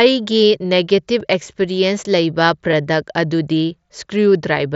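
Concealed Bluetooth headset packet loss at 1.20 s and again at 2.72 s: each time a single short voice packet, about 7.5 ms of audio, was lost between the headset and the phone, and the receiver filled the hole by repeating the best-matching recent stretch of waveform, so each loss is nearly hidden, a faint blip within the speech. The mSBC wideband headset codec carrying the call adds only light graininess.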